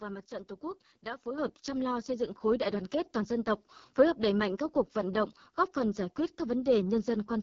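Throughout, the speech sounds rough and raspy, with nothing above about 7.4 kHz. This is the AMR wideband (HD Voice) codec, whose heavy damage points to its lowest mode, near 6.6 kbit/s, where too few pulses drive its vocal tract model.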